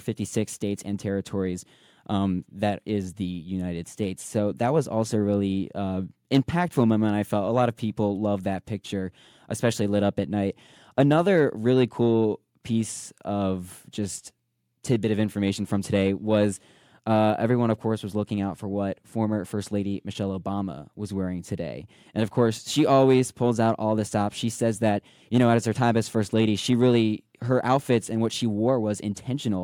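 No technical faults are audible anywhere in the recording.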